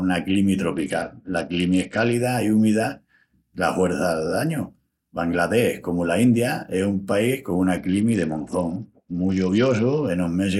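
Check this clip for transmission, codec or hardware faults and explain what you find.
Two Bluetooth SBC bit pool drops occur, from 0.74 to 2.14 s (ending before "i úmida") and from 7.78 to 10.07 s. Starved of bits, high sub-bands vanish and the rest coarsen. Treble dulls and grit rises, which fits a fall from bit pool 31 to 9, near 72 kbps.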